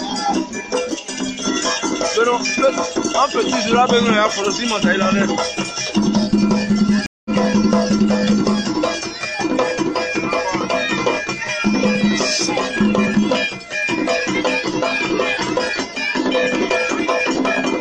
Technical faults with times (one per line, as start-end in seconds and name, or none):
7.06-7.31 stream reconnect